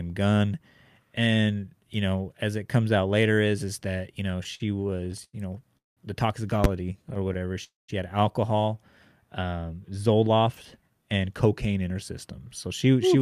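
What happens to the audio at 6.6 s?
At 6.64 s the speech is hit by invalid numbers at full scale: a calculation produced infinite or invalid values that were clamped to the maximum, pinning the output for about 10 ms. Heard as one sharp bang, it shows as a flat slab far beyond the speech peaks on the waveform and a bright broadband vertical stripe on the spectrogram.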